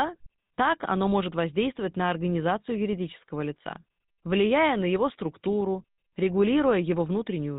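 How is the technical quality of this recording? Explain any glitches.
The recording is degraded by plainly audible codec coloration across the whole speech clip. GSM full-rate codec, throughout: a vocal-tract model excited by sparse, regularly spaced pulses rebuilds the speech, consistent with a 13 kbps stream. It cuts everything above 4 kHz, producing a muffled, buzzy, gravelly roughness that is plainly audible.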